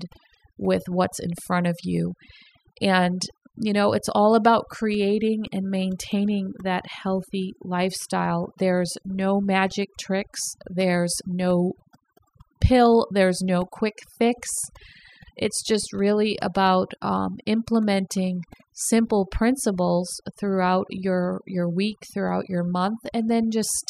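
From start to finish, the speech carries overdone noise removal. A noise reduction stage was set far too aggressively for the noise it faced. Each frequency band that dips near its noise estimate gets pulled down hard or shut off. Softer parts of the voice fall under that line and vanish with the noise. Between phrases the background drops away, breaking up into twinkling, warbling specks.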